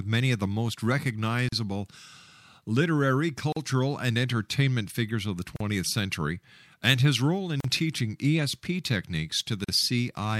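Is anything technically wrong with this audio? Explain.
Yes. Brief dropouts of about 40 ms cut into the speech at 1.49, 3.52, 5.56, 7.60 and 9.64 s, recurring every 2.0 s. These are gaps at a join of encoded pieces: separately encoded chunks were joined without trimming their start delay and end padding.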